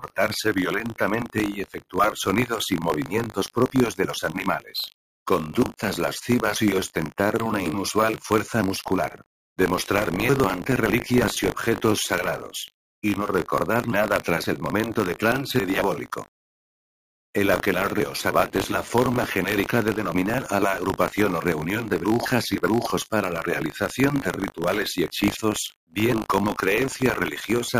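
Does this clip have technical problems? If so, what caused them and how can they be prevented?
Yes. A steady robotic buzz at 50 Hz runs through the whole clip whenever there is sound. This is buffer tearing: the writer and reader of the ring buffer have drifted so they cross every 20 ms period, leaving a small slice of each buffer holding audio from roughly 40 ms earlier, with hard joins around it. Preventing it means keeping the application's write position safely ahead of the hardware read pointer, with enough buffer headroom and clock-drift correction.

From 0.00 to 0.18 s and again from 1.59 to 1.96 s, the sound sinks sharply, by about 20 dB and about 21 dB at its deepest. This is sound cut by the noise suppressor, which mistook this sound for background noise and attenuated it more than everything else. Lowering the suppression strength or giving the suppressor a slower, less aggressive gain release would let these sounds through intact.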